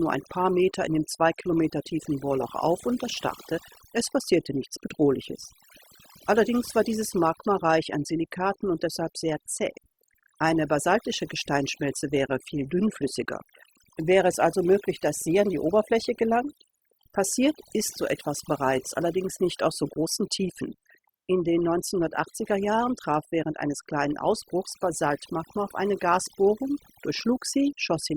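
Overdone noise removal runs throughout: bands near the noise estimate are cut hard, leaving near-silent twinkling gaps.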